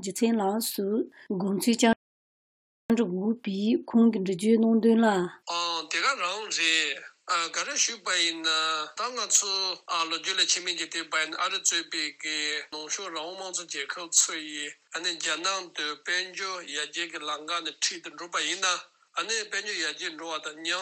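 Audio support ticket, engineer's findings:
Rebuffering stall at 1.93 s to 2.90 s. Playback buffer ran dry and the client player halted until more downloaded audio arrived. Sound drops to silence for about 0.97 s, then resumes at exactly the point it stopped. No content skipped or repeated, just dead air added to the running time. Probable component: client-side buffering or delivery throughput during early playback.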